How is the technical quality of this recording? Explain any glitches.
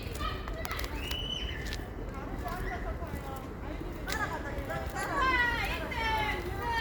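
One fault stands out. From 5.44 to 6.80 s, a USB whine appears: a steady tone on a 1 kHz frame rate, strongest near 14 kHz, around 25 dB below the sound. USB frame current leaks through power or ground.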